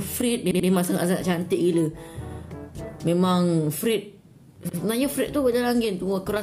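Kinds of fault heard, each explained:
Repeated buffer: when fresh audio misses its deadline, the device replays the block it already holds. Here a piece of about 85 ms, which fits a 4096-sample buffer, sounds again with a hard join at each restart, giving three audible stutters. From 0.51 to 0.68 s the piece plays three times in a row, and at 2.30 s and 4.69 s it plays twice. Nothing appears to be skipped; the repeats just push later audio back.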